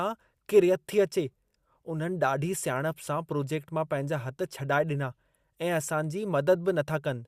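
No technical faults are audible.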